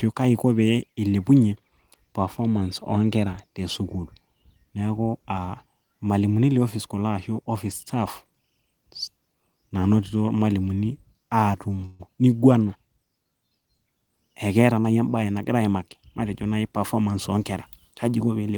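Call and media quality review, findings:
Call audio freeze, 11.85 to 12.01 s. Brief continuation of the last sound, then speech resumes where it stopped. Likely late packets emptying the jitter buffer; 140 ms gap added, nothing lost.

Jitter buffer speed-up, 14.77 to 15.97 s. Speech hurried at unchanged pitch, about 111% speed. Receiver trimming pitch-period slices to shed roughly 150 ms of excess buffered delay.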